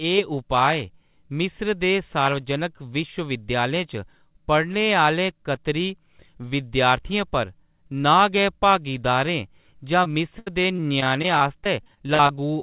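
From 10.04 to 12.39 s, over narrowband call audio with nothing above 4 kHz, repeated packet loss (robotic sound) sets in. A rapid run of short holes, the longest 78 ms, is each patched by extending the last sound, making choppy speech with pieces missing. Unlike a single dropout, the holes keep recurring.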